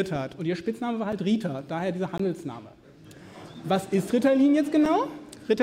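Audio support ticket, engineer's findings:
Block of digital silence, three dropouts at 1.12 s, 2.18 s and 4.85 s. Abrupt cut to silence and back, no fade. Gaps at 1.12 s and 4.85 s are 5 ms each, heard as ticks, not silence. Gap at 2.18 s is 18 ms, long enough to register as a brief hole in the audio. Probable component: output stage. Mechanism: buffer not filled in time, or a calculation producing invalid values replaced by zeros.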